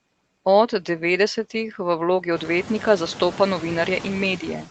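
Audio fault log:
throughout noise suppressor artifacts: the suppressor lowers, frame by frame, each band it takes for steady noise, cutting the background by about 17 dB. The room noise, which grows by about 16 dB from around 2.5 s, sinks between words and comes back beneath them.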